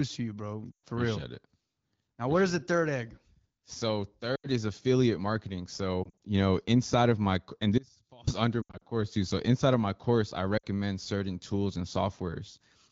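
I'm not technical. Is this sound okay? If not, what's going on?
No. There are two kinds of fault.

Lost AMR speech frames: at 0.72–0.86, 4.36–4.47 (just before "is affiliate marketing"), 6.03–6.19, 8.61–8.82 and 10.57–10.65 s, the phone link lost short pieces of speech. The decoder briefly guessed, so these sound like brief dips or warbles, the longer ones fading almost to silence, and the voice comes back weak or rough for a moment.

Audio dropout to a faint residue: from 7.78 to 8.27 s, right after "inside of my and", the sound cuts off abruptly for about half a second, likely because the signal was lost. Only a faint trace remains, unlike the guessed-over glitches.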